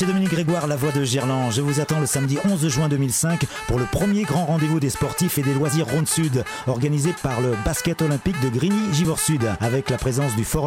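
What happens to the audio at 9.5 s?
Nothing goes wrong at 9.5 s; the sound carries through that moment intact, with no dropout, click or distortion.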